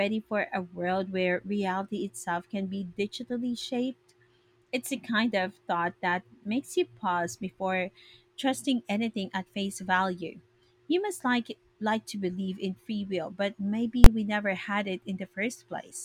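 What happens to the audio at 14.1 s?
At 14.04 s the speech is interrupted by invalid numbers at full scale. A calculation in the processing chain returned infinite or undefined values, and these were forced to the largest positive or negative sample value for a block of about 20 ms. Because the block is so short, it is heard as a single loud bang rather than two separate pops. On the waveform it appears as a flat slab held at one extreme value, far beyond the speech peaks. On a spectrogram it shows as a bright vertical stripe across all frequencies.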